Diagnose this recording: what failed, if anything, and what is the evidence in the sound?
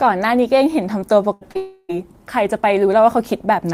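The network stage failed, in three closely spaced events. From 1.33 to 1.43 s there is a burst of packet loss. About 80 ms of speech never arrived, and the receiver covered roughly 75 ms of it by extending the last sound and fading it, so a held buzz or fading hiss stands where the speech should be. The talk then picks up further along, with the intervening part gone. That skip forward, lasting under a tenth of a second, marks it as a burst rather than a longer outage.

At 1.51 to 1.57 s, short concealed packet loss leaves a brief smear or wobble. Around 40 ms went missing, and the decoder filled about 38 ms by continuing the pitch or shaped noise of the previous sound before blending back in. It is too short to become a sustained buzz, which separates it from the burst just before. A short consonant could disappear here without an obvious gap.

Immediately after, from 1.57 to 1.91 s, the audio stalls for about a third of a second. 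The last sound is stretched and decays for roughly 320 ms, and a trace of silence, about 20 ms, follows before speech resumes further on with that stretch missing. This is likely a long network dropout. The clearest sign is that the concealment runs long enough to die away toward silence, which the two shorter losses never do.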